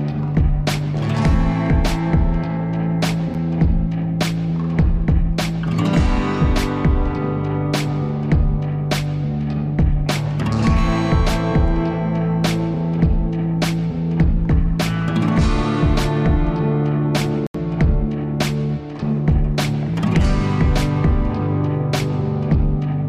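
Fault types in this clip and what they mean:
Bluetooth stall: The sound drops out to silence twice and then carries on: a tiny 7 ms gap at about 3.34 s, and a more noticeable 79 ms hole from 17.47 to 17.55 s. That pattern of brief dead air with playback resuming afterwards is most likely a wireless hiccup, where interference delayed packets, the headphones ran through their buffered audio, and output stalled until the retransmitted data showed up.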